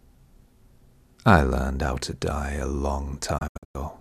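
At 3.38 s a digital broadcast dropout begins and lasts until 3.80 s. The receiver mutes whenever frames go bad. About 240 ms of audio vanishes in several short holes, the longest 96 ms, each faded out over 8 ms. That fits roughly ten lost frames.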